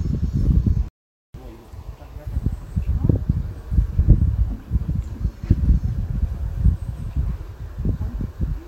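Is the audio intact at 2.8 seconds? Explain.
Yes, the audio is intact at 2.8 seconds, with no dropout, click, distortion or other technical fault at that moment.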